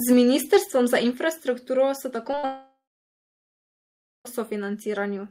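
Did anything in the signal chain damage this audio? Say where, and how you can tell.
Yes. At 1.14 s the speech drops about 5 dB in one step. That's the call processing likely turning the microphone volume down a notch.

Short concealed packet loss starts at 2.31, 2.35 and 2.39 s. About 20, 20 and 40 ms went missing, and the decoder smeared the last sound across each gap.

A long network dropout likely follows from 2.45 to 4.27 s. The concealment fades out, then there's about 1.45 s of silence before the speech returns with the middle missing.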